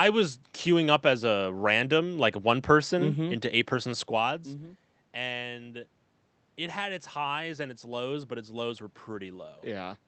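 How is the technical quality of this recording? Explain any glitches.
No technical glitches can be heard in this recording.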